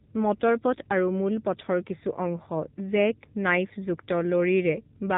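Speech runs through the AMR narrowband mobile codec for the whole clip: nothing passes above about 3.8 kHz, and voiced sounds take on a buzzy, synthetic edge that points to a low AMR-NB mode near 7.4 kbps. That edge separates it from plain band-limiting.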